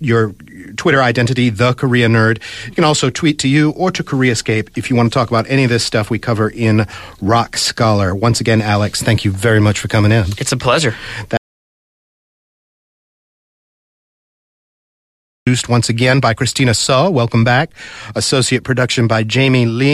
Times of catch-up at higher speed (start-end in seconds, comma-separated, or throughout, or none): none